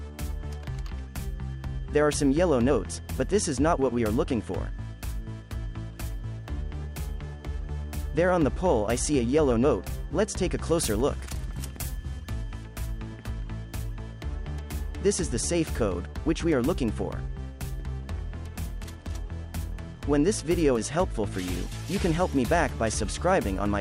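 Pre-emphasis left on from 10.57 to 12.64 s: the treble boost applied before recording, which fits the CD 50/15 µs curve, was never reversed by its matching cut. Highs sit about 8 dB above 1 kHz at 10 kHz, making the sound thin, bright and sibilant.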